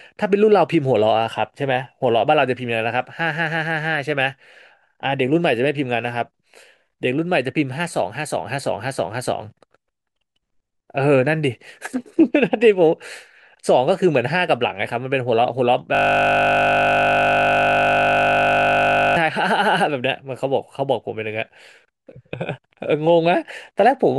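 At 15.95 s the speech locks into a system hang loop until 19.16 s. The system froze while the audio hardware kept replaying one 20 ms buffer. That tiny loop repeats 50 times a second, so it sounds like a steady 50 Hz buzz.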